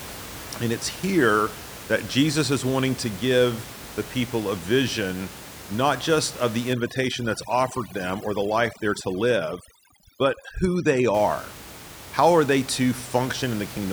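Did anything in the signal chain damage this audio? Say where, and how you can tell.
Yes, overdone noise removal in the processing stage, from 6.73 to 11.14 s, starting after "not just of the". Room noise sitting about 16 dB below the speech drops and breaks up into twinkling specks. A spectrogram shows scattered isolated time-frequency dots and holes.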